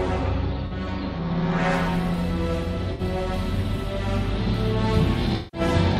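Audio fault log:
0.67–0.72 s, 2.93–3.01 s, 5.36–5.61 s: AAC frame loss with concealment. The decoder rebuilt roughly 43, 64 and 171 ms of missing audio from the last good spectrum, giving smeared, phasey patches. On a spectrogram these appear as blurred, flattened bands, and the longest dims toward silence before recovering.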